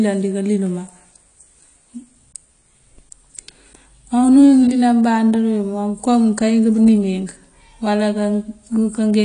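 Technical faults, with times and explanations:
Throughout, AAC compression: the speech has nothing above about 10.2 kHz and plainly audible coding damage, likely from AAC-LC at a rate that fits around 32 kbps. Too few bits forces the encoder to drop the top band and coarsely quantise what remains, so the voice sounds dull and smeared, with a warbling, fizzy texture on sibilants. Simple low-pass filtering would also dull the sound, but it would leave no such swirling grain.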